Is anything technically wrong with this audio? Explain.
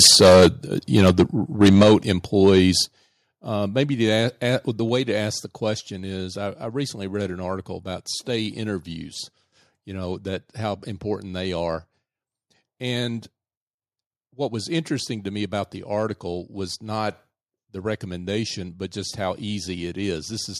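Yes. The speech has two related faults.

Microphone overload occurs at 0.00–0.47 s, 0.96–1.23 s, 1.61–2.12 s and 2.42–2.61 s. Peaks exceed the converter's limit by about 12, 8, 11 and 3 dB. The input gain was likely set too high. Waveform tops get flattened, giving loud syllables a harsh crackle.

The microphone volume stepped down at 0.07 s, 1.83 s, 2.85 s and 4.89 s. The drops are about 2, 7, 7 and 2 dB. The last falls between "the a the" and "to ask the". Software likely cut the input gain after detecting clipping. Voice and background drop in level abruptly.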